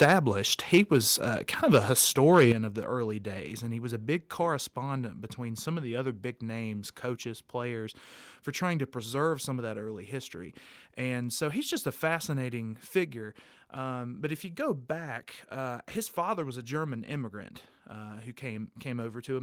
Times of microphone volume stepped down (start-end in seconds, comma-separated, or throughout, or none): 0.04, 2.52